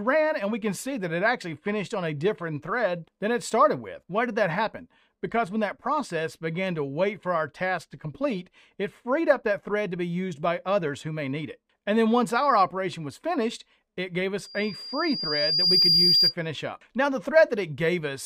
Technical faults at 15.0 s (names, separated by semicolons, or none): loudspeaker feedback squeal